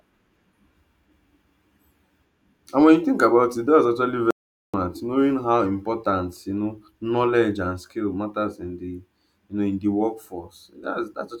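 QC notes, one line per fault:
4.31 to 4.74 s, audio dropout to silence: the speech cuts off mid-flow and about 0.43 s of dead digital silence follows, with no room tone at all, before it snaps back. That points to the input likely dropping out while recording carried on writing zeros.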